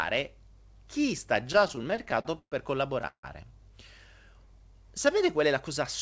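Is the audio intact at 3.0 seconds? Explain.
No. From 3.02 to 3.05 s the sound is briefly held too long, with a faint buzz or dip. This is a short stall from a late packet: the jitter buffer ran dry and the receiver stretched the last sound by about 17 ms, then resumed where it stopped, losing nothing.

From 3.07 to 3.25 s comes a call audio freeze: the last sound continues as a fading buzz or hiss, then about 90 ms of silence. Packets were likely held up in transit, emptying the jitter buffer. The 161 ms gap is added, not cut out.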